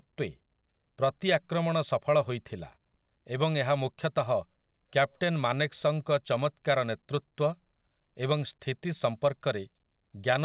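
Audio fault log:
No faults to log in this one, just speech carried over a call line that tops out around 4 kHz, which fits a G.711-style telephone codec doing its ordinary job.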